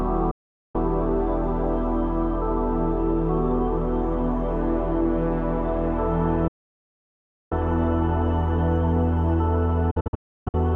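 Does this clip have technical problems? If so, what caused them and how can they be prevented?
Yes: a digital broadcast dropout mutes the audio three times, at 0.31 to 0.75 s, 6.47 to 7.52 s, and 9.91 to 10.55 s, where the last one breaks into several short holes (longest 0.31 s). The receiver stopped getting valid frames and silenced output, with gaps consistent with 24 ms frames. A waveform shows flat silent blocks with 8 ms ramps; a spectrogram shows blank vertical bands. Stronger reception or error protection prevents it.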